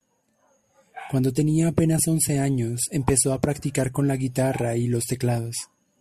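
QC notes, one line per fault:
No faults heard anywhere in the speech.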